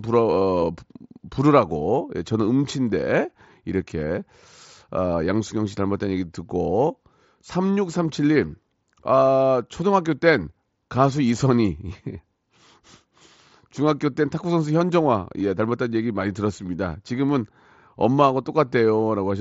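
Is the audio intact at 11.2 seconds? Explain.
Yes, the speech at 11.2 seconds is intact, with no fault at that moment.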